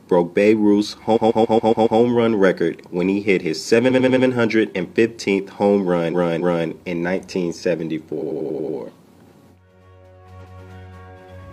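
Repeated frames stutter the audio five times: 1.12 to 1.95 s (a 139 ms block played six extra times), 3.86 to 4.23 s (93 ms, four extra), 6.09 to 6.64 s (279 ms, twice more), 8.18 to 8.73 s (93 ms, six extra) and 10.41 to 10.59 s (186 ms, once more). Compressed frames were delivered again, so each identical slice replays. Unlike a dropout, nothing goes missing, and the clip runs about 2.5 s longer.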